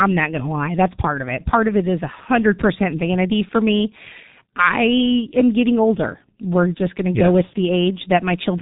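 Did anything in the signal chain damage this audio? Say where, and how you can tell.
Yes, at the codec stage: the whole speech clip carries G.723.1 codec damage. Nothing reaches above 3.8 kHz, consonants smear, and the voice sounds hoarse and muffled. That heavy degradation fits a roughly 6 kbit/s low-rate coder with 30 ms frames, whose slowly updated voice model can't follow fast articulation.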